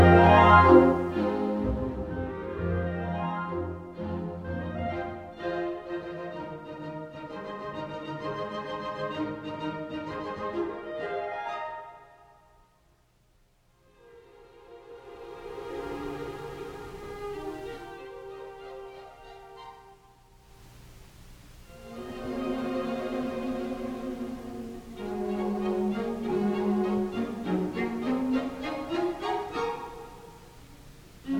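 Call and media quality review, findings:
No faults found on review. Level moves are smooth and gradual, like a fader being eased down or up.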